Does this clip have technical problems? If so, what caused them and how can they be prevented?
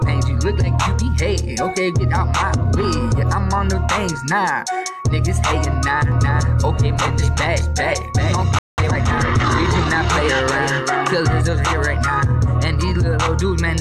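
Yes. From 6.12 s to 11.41 s a doubled audio track is audible: a second full-band copy, about 5 dB quieter, trails the original by roughly 0.4 s, with no decay or room colour, and it cuts in and out abruptly. The likely cause is the same signal being captured again through a slower path. Routing each source through a single capture path, or muting the monitor return, would prevent it.

A playback stall silences the sound at 8.59 s for about 0.19 s before it resumes, most likely because the player's buffer ran dry or its audio thread was blocked. A larger playback buffer and a high-priority audio thread that never waits on I/O would prevent it.

From 8.78 s to 9.54 s the player recovers with time-compressed catch-up. It trims and cross-fades short segments to clear its backlog, so the audio runs at 1.25 times speed at normal pitch. Preventing the stall removes the need for it.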